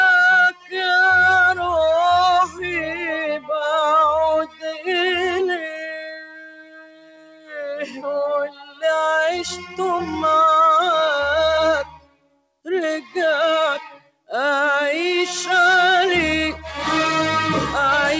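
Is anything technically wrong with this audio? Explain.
Yes. A speech-oriented noise suppressor was left running on material it wasn't built for, and you can hear it pumping all the way through. It treats steady, sustained content and decaying tails as background noise and pulls them down, while sharp onsets get through mostly intact. The level keeps swinging by around 15 dB, so held sound sinks and flutters and tails get chopped short. The whole clip ends up thinner and less stable than it should be.

The sound cut by the noise suppressor shows up as distinct dips at 0.50–0.76 s (about 16 dB), 2.46–2.74 s (about 13 dB), 4.44–4.87 s (about 14 dB), 5.63–8.06 s (about 21 dB, the longest, roughly two seconds affected), 8.47–8.84 s (about 15 dB), 11.84–12.67 s (about 21 dB), 13.01–13.16 s (about 11 dB) and 13.86–14.31 s (about 21 dB). Each time, the suppressor decided what was sustaining there was noise and ducked it, so the sound drops away or its decay gets clipped.

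The band tops out at 8 kHz, which fits G.722 at 64 kbps on a call path, and that ceiling is normal for that chain.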